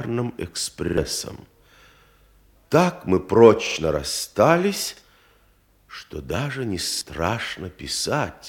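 Four times, new audio failed to reach the playback device in time, and it replayed its last buffer instead: a repeated buffer. Each repeated slice lasts about 46 ms, which fits a 2048-sample buffer. At 0.88 to 0.98 s and 3.67 to 3.76 s, the slice plays twice more. At 4.97 to 5.02 s it plays once more, and at 6.92 to 7.01 s twice more. Each is a short stutter with hard joins and skips about a tenth of a second of audio, or half that at 4.97 s.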